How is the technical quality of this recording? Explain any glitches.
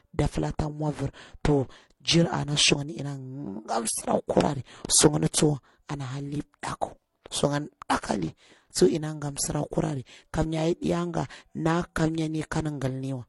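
The speech is compromised throughout by layered compression damage. From start to finish the artefacts of different codecs are heard together, with nothing above 11.4 kHz. That points to transcoding between lossy codecs, likely a low-rate MP3 pass followed by HE-AAC around 32 kbit/s. The second encoder spent bits re-encoding the first one's artefacts and added its own, while the lowest cut-off survived.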